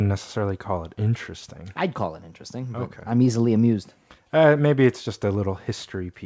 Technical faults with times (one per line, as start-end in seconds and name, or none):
none